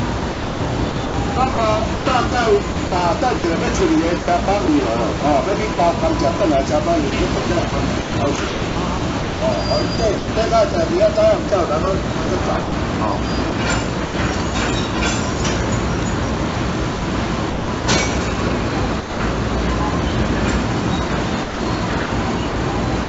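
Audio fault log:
0.2–14.1 s, sound chopped by the voice detector: About 2 s of quiet detail is swapped for comfort noise. The likely cause is the sender's detector flipping repeatedly.
15.38 s, sound dropped by the voice detector: A 20 ms gap fills with steady comfort noise. The detector likely mistook quiet sound for background and briefly stopped sending.
16.5–17.8 s, sound chopped by the voice detector: About 0.3 s is replaced by synthetic noise. The chopping likely comes from the detector toggling on and off.
19.0–19.2 s, sound dropped by the voice detector: The sound gives way to 200 ms of steady comfort noise, likely because the detector cut transmission until it triggered again.
21.1 s to the end, sound chopped by the voice detector: About 0.35 s becomes comfort noise in choppy fragments. This is likely detector switching, and the band stops near 7 kHz on the call codec.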